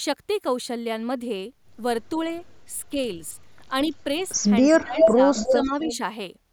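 At 3.88 to 3.93 s the speech briefly dips by about 5 dB. This is speech suppressed in double talk, likely because the echo canceller mistook simultaneous talk from both ends for its own loudspeaker echo and turned everything down. It returns harder from 4.66 to 5.21 s, with a drop of about 20 dB, and again from 5.42 to 5.92 s, at about 10 dB. Unlike a dropout, nothing is replaced or repeated. The talker's level simply sags, then recovers.

Interleaved with those dips is echo leak, likely from a loudspeaker endpoint whose canceller let part of the microphone pickup through. A copy of the speech returns about 0.28 s late, steady at 277 to 279 ms. It starts faint, about 35 dB down at 4.19 to 4.25 s and about 25 dB down at 4.63 to 4.81 s. It then grows to about 5 dB above the speech at 4.99 to 5.1 s and stays about 5 dB below it from 5.35 to 5.96 s. That fixed delay, heard as a distinct repeat rather than a smeared tail, is what separates it from room reverberation.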